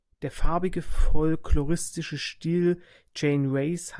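No technical faults can be heard anywhere in the signal.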